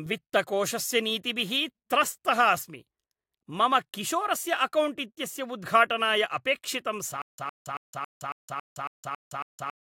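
It's a speech clip, and right after "उद्घाटनाय अपेक्षितं" at 7.22 s it falls into a stutter with silent gaps until the end: a 110 ms fragment repeats nine times, with about 166 ms of dead silence between, every 276 ms. That's likely a stalled stream replaying its last buffer.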